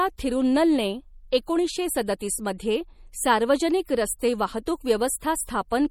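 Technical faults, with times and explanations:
Throughout, MP3 compression: plainly audible watery, swirly texture on the speech with smeared consonant attacks, likely from a low bitrate around 48 kbps starving weak frequency lines.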